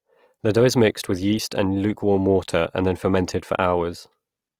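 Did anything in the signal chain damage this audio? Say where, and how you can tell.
Yes. Across the whole speech clip the voice has a rough, grainy texture, with a fizzy, noisy edge on voiced sounds where clean harmonics should be. Full bandwidth is retained and there is little swirling and few holes in the spectrum. This points to the codec stage, likely Opus compression in its music (CELT) mode at a low rate, which fits about 24 kbps. Short of bits, the encoder preserves each band's energy but fills the fine detail with folded or noise-like content, roughening the tone.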